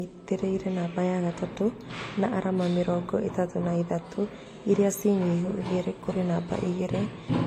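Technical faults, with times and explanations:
Throughout: transcoding between lossy codecs. The speech carries two layers of coding damage at once, consistent with an earlier AAC-LC pass at around 48 kbit/s followed by a WMA encode at around 96 kbit/s. There is nothing above 16.7 kHz, a ceiling set by the lowest cut-off in the chain that the later encode cannot restore. The second codec spends its larger budget on the first codec's artefacts, then adds its own quantisation noise on top. The result is likely a codec chain rather than a single encode.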